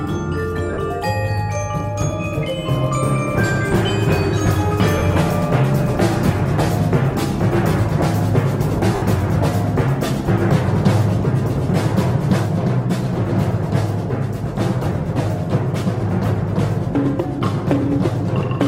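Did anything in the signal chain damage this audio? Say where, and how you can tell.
Yes. Lost LE Audio frames on the Bluetooth link cause gaps at 0.73–0.77 s, 4.98–5.02 s and 8.95–9.02 s, lasting 40, 40 and 70 ms, which fits 10 ms frames. The LC3 decoder filled each gap by reusing the last spectrum with random signs, so the sound smears into noise rather than cutting to silence as a plain dropout would.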